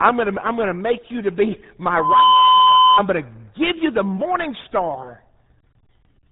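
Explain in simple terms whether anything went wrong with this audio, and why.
Two things went wrong. The whole recording passed through the RealAudio 14.4 codec, an old dial-up format. Everything above 3.8 kHz is gone, so speech sounds muffled and gargly.

From 1.93 to 3.03 s there is a loudspeaker feedback squeal. A microphone picked up its own speaker, and a 1 kHz tone swelled within about a third of a second, drowning out the speech.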